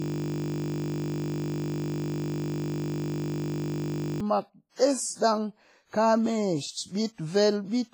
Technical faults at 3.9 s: WMA compression; system hang loop

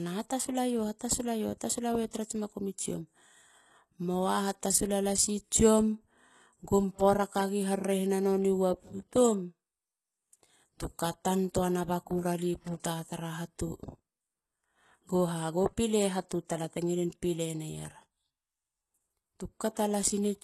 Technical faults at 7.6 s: HE-AAC compression; clock slip clicks

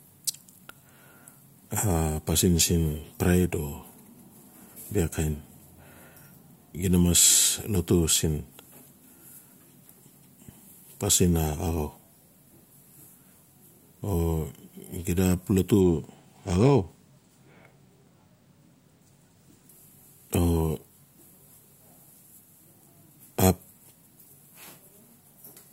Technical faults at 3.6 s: none

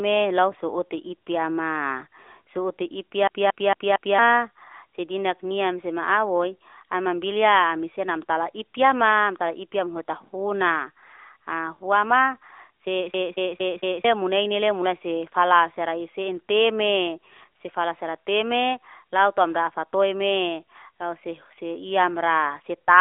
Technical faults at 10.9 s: AMR narrowband mobile codec

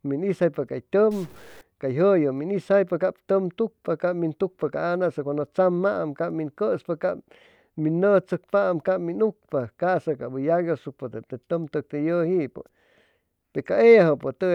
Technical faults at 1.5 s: stuck bit

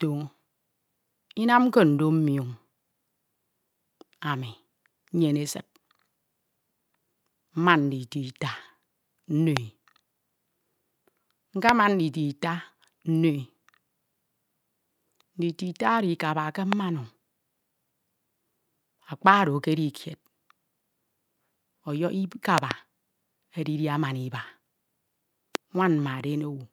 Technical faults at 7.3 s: none

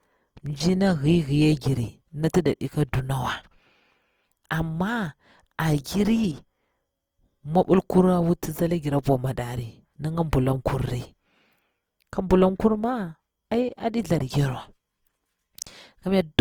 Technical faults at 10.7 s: Opus compression

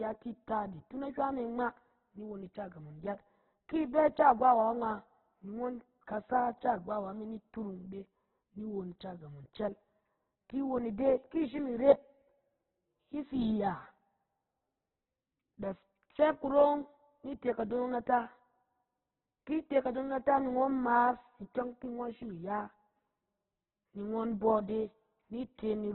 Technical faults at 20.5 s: Opus compression

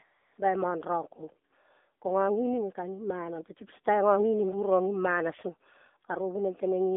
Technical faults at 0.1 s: AMR narrowband mobile codec; AMR comfort noise

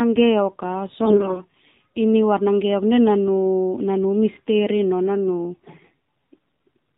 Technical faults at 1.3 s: AMR narrowband mobile codec; AMR bit errors

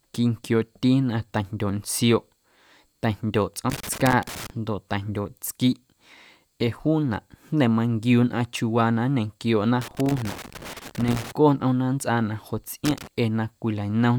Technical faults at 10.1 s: loose connector crackle

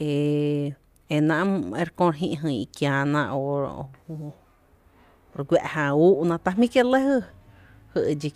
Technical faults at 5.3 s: none

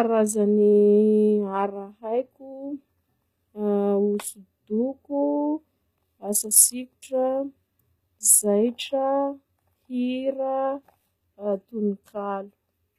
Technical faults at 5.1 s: HE-AAC compression

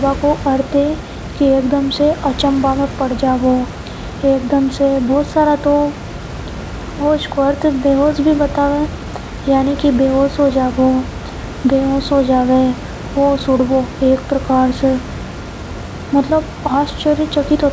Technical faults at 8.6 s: none

